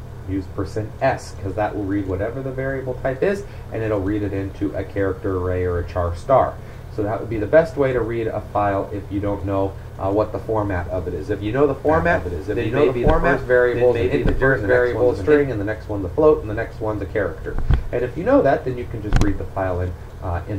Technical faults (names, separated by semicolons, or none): doubled audio track